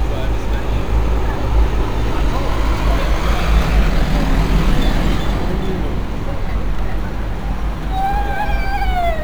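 Sample clock jitter runs throughout: the converter clock wanders by several microseconds, adding hiss roughly 35 dB down that grows on loud, bright sounds and disappears in silence.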